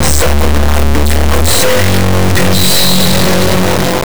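Throughout, the integer-read-as-float fault turns 32-bit integer samples into garbage 32-bit float values, giving a harsh, clipped square-wave buzz; the waveform slams between zero and the clipping limit, with broadband vertical smearing across the spectrogram.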